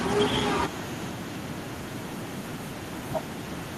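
Echo with no canceller runs throughout the speech: the far end's loudspeaker output leaks into its microphone and returns unremoved after the network round trip, so each phrase is trailed roughly a third of a second later by a faint, thin copy about 28 dB down.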